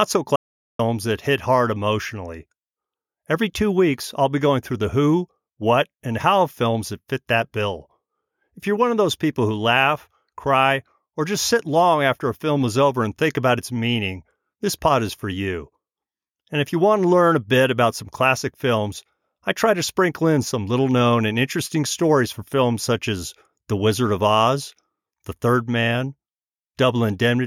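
Right near the start, from 0.36 to 0.79 s, the speech drops out to dead silence for about 434 ms, an audio dropout to silence. There's no room tone in the gap, so the input was likely lost while the recorder kept writing silence, and whatever was said there is gone.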